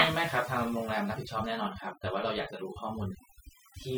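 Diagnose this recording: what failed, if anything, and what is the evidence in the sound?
Overdone noise removal in the processing stage, throughout. The background drops and breaks up into twinkling specks. The speech has its quiet parts cut away with the noise.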